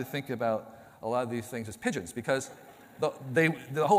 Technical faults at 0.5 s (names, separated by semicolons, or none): none